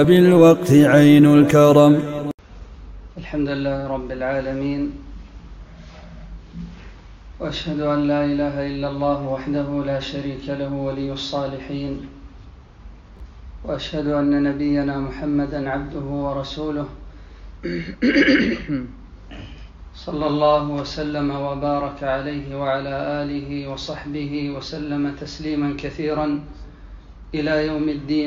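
At 13.17 to 13.20 s, chunks out of order: one 11.6 ms chunk arrived two chunks late, so the audio briefly jumbles at three hard joins.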